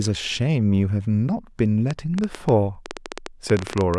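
At 1.91 s a train of clicks begins and runs to 3.95 s: about twenty short, same-shaped pulses, roughly 10.3 per second, standing out around 15 dB above the speech and ticking through the pauses too. The spacing is uneven, so it doesn't fuse into a buzz or hum, and the uniform click shape separates it from random crackle. The likely source is interference from nearby equipment or a faulty connection or power supply.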